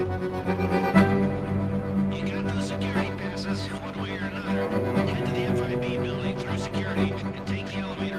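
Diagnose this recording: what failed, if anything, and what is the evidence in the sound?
Nothing went wrong here: I listened for anything that broke along the chain and didn't hear a problem anywhere.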